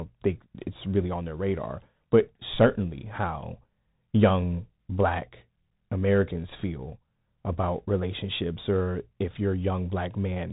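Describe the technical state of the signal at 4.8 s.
At 4.8 s, as throughout, it's the Bluetooth CVSD headset codec: one-bit delta steps give grainy hiss and scratchy s sounds, with nothing above 3.8 kHz.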